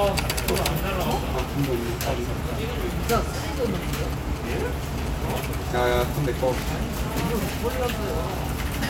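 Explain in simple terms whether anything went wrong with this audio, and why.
From 3.57 to 6.50 s there are GSM signalling bursts: a 2G phone nearby sends short clusters of radio pulses, and the audio circuitry picks them up and turns them into sound. You hear a galloping dit-dit-dit of brief buzzes, sitting below the main audio.

Right after, from 6.53 to 8.45 s, it becomes GSM phone buzz. The phone is now in a call, pulsing steadily about 217 times a second, which gives a constant, harsh, raspy buzz underneath the sound, quieter than the earlier bursts.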